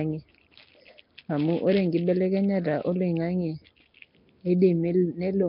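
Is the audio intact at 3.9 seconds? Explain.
No. At 3.9 seconds, as everywhere else in the clip, the speech carries a rough, hissy halo and a smeared, underwater quality, and nothing comes through above about 5.3 kHz. That's likely Nellymoser compression, the old Flash microphone codec, heavily applied. It codes short blocks with a fixed, tiny bit budget, so weak bands get nothing and are filled with noise. The damage level fits a bitrate around 22 kbps.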